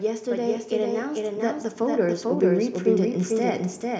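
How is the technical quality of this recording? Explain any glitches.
The recording has two clear faults.

A doubled audio track runs through the whole clip. A second copy of the speech trails the original by roughly 0.4 s, somewhat quieter, at about 5 dB down. It is likely the same signal captured twice through a slower path. The copy is full-band and dry, with no decay, so it sounds like a distinct repeat rather than room echo.

Automatic gain rising runs from 0.05 s to 3.95 s. The gain control judged the input too quiet and kept lifting it, by about 9 dB in total. The speech and the background noise swell together, steadily, across the whole span.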